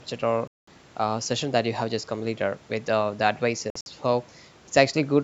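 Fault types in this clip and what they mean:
Bluetooth dropout: speech cuts to silence from 0.47 to 0.68 s and in broken gaps between 3.70 and 3.86 s, likely from late wireless packets discarded; the waveform shows flat-line holes, the spectrogram blank vertical bands, and sound resumes as if it had played on.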